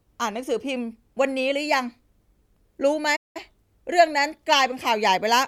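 At 3.16 s the speech cuts out abruptly. This is a playback stall. The silence lasts about 190 ms, until 3.37 s. The player likely ran short of data or was blocked, and output stopped. The speech then resumes mid-flow.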